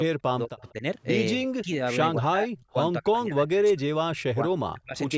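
From 0.09 to 0.83 s, and again at 1.36 to 1.8, 2.15 to 2.76, 3.0 to 3.88 and 4.06 to 4.96 s, the speech drops away in pieces by up to about 40 dB, easing to about 25 dB in the last two stretches. This is speech suppressed in double talk, likely an echo canceller attenuating the near talker while the far side was also speaking.

Between 0.68 and 0.72 s a faint delayed copy of the speech comes through about 191 ms late, roughly 35 dB below the direct sound. This is an echo leak, likely residual loudspeaker pickup that the far end's canceller failed to remove.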